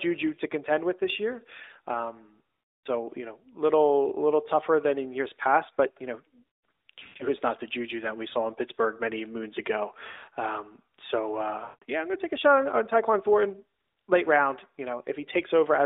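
At 2.71 to 2.86 s, 7.00 to 7.25 s, 10.08 to 10.30 s and 11.64 to 11.84 s the sound stretches into a smeared, fading drone: lost AMR speech frames. Corrupted frames were discarded, and the decoder repeated its last pitch and vocal-tract settings at shrinking gain. The second and third events are broken runs, with the longest stretches lasting 120 ms and 60 ms. On a spectrogram, harmonics flatten into frozen horizontal bands that dim toward silence. The waveform envelope decays, then recovers weakly. The narrowband AMR-NB band above 4 kHz stays empty throughout.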